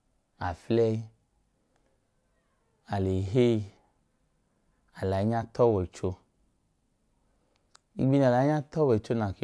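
A speech recording with nothing technically wrong with it, so there are no times or causes to give.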